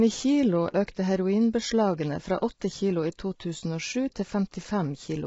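From start to finish, the speech carries heavy low-delay AAC compression damage. The voice sounds rough and grainy. Noise fills the gaps between the pitch harmonics, so the tone never sounds clean. Nothing reaches above 7.7 kHz, and the top of the band thins out. The likely cause is AAC-ELD, the low-delay codec of video calls. Its short frames resolve harmonics poorly. The degree of damage fits a bitrate around 16 kbps.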